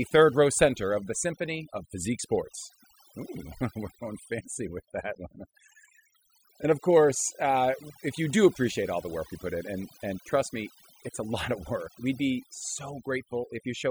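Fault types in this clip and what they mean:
overdone noise removal: Through the whole speech clip the background drops and breaks up into twinkling specks. Noise reduction was pushed too hard, so frequency bands sitting close to its noise estimate are cut away, taking quiet parts of the voice with them.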